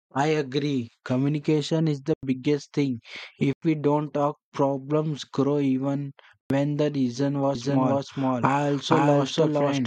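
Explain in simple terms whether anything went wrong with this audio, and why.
Three times, the speech drops out completely for a split second. These are blocks of digital silence. They start at 2.14 s, right after "is the", at 3.53 s, just before "we don't talk problems", and at 6.41 s. Each gap lasts about 93 ms. The sound stops dead and returns with no fade. The equal gaps fit a 4096-sample buffer that the program did not fill in time.

From 7.55 s, right after "the reason", to the end of the clip, there is a doubled audio track. A second copy of the speech plays about half a second behind the first. It is about as loud as the original, so the two overlap and sound jumbled. The copy starts suddenly and adds no room echo. It is likely that the same sound was captured twice, once through a slower path.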